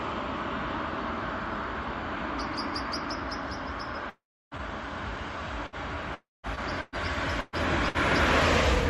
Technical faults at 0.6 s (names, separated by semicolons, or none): none